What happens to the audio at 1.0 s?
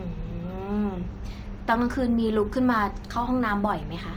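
At 1.0 s, as throughout, sample clock jitter of a few microseconds adds faint roughness about 40 dB below the speech, heard and seen as broadband spectrogram haze tracking loud, bright sounds.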